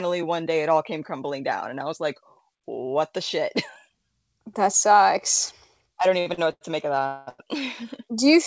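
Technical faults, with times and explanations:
6.20–6.28, 6.34–6.40 and 6.52–6.63 s, short stall from a late packet: just after "that sucks I don't", packets repeatedly arrived late and the jitter buffer emptied, so the last sound was stretched for 57, 40 and 94 ms. The speech resumes intact before "to make" but drags with a faint buzz or dip.
7.06–7.29 s, call audio freeze: the likely cause is packets held up in transit, draining the jitter buffer for 205 ms. The receiver filled the wait by continuing the last sound as a fading buzz or hiss, never reaching silence, then picked up exactly where it stopped.
7.29–7.41 s, short stall from a late packet: immediately after the freeze, one more packet came late and the jitter buffer ran dry again. The last sound was held for 96 ms, adding a further brief stretch with nothing lost.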